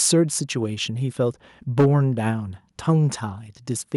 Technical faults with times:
0.05-0.14 microphone overload
1.79-1.86 microphone overload
1.81 microphone volume stepped down

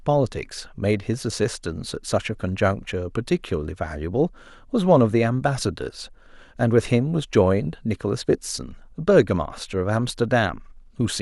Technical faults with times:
none

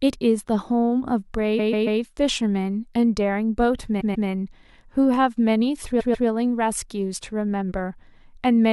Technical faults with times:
1.58-2.00 repeated frames
4.00-4.27 repeated frames
5.99-6.27 repeated frames

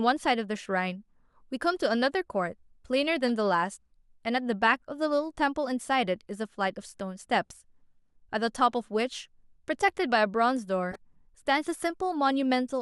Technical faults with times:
3.27-3.30 corrupt frame decoded
10.92-10.96 corrupt frame decoded

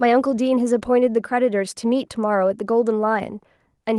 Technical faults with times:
none

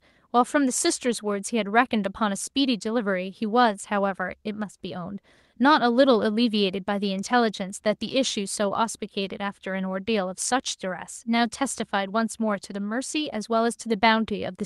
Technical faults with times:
none

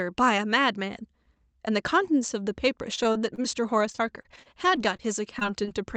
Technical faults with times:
2.95-3.46 repeated packet loss (robotic sound)
3.92-5.01 repeated packet loss (robotic sound)
5.39-5.69 short concealed packet loss

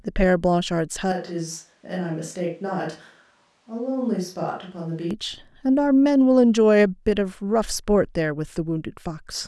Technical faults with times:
1.12-5.11 switch to a distant microphone

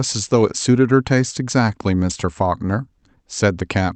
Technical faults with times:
0.00-3.96 clock drift between sender and receiver
0.49-3.59 repeated timing corrections

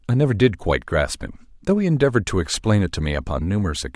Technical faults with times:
none

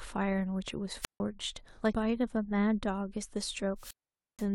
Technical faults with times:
1.01-1.20 wireless microphone squelch dropout
1.92 damaged data in a compressed stream
3.76-4.49 wireless microphone squelch dropout
4.08 damaged data in a compressed stream

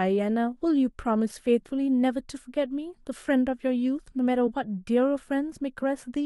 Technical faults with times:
4.46 compressed frames skipped
5.82 compressed frames skipped

